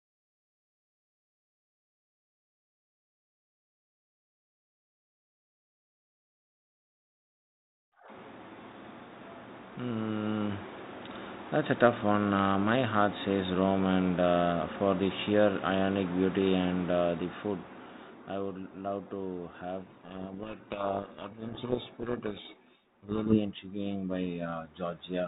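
Speech, band-limited below 4 kHz with light coding noise that fits G.726 at 32 kbit/s. From 19.78 to 23.39 s the speech is buried in harsh, grinding distortion. This is a codec payload misread: the receiver reads each G.726 code word with its bits in the wrong order, so the decoded difference steps are wrong until the packing matches again.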